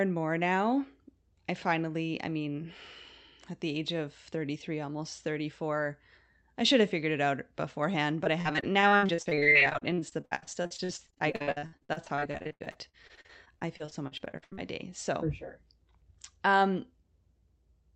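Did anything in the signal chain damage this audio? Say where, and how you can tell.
Yes, at the network stage. From 8.24 to 14.59 s, repeated packet loss (robotic sound) hits with 78 gaps of up to 77 ms. About a third of that span is patched by extending the last sound, giving choppiness rather than the silent holes of plain dropouts.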